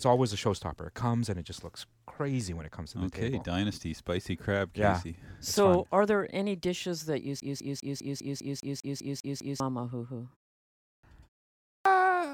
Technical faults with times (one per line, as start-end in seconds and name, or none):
7.40-9.60 CD stuck on one turn
10.77-11.03 clipped start after a pause
11.60-11.85 clipped start after a pause